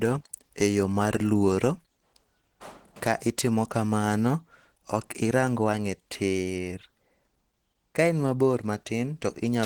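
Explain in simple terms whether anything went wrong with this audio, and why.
Something did go wrong. From start to finish, the speech carries plainly audible damage, likely from Opus compression squeezed to very few bits. That forces the encoder into its mixed speech mode, which leaves the speech sounding hoarse and somewhat muffled throughout.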